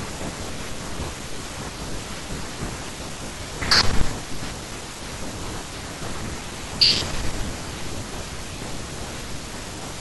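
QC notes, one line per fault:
3.72–4.01 s and 6.82–6.96 s: hard clipping. Speech peaks overdriven by about 9 dB and about 7 dB are cut flat, adding high harmonics.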